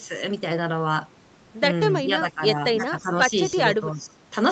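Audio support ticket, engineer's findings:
Speech suppressed in double talk at 2.06–2.42 s, 2.78–3.14 s and 3.80–4.20 s; level ducks about 10 dB, then about 20 dB in the last. Likely echo canceller suppressing near-end during overlap. Partial dips, not full-silence packet-loss gaps. 8 kHz ceiling expected from Opus path.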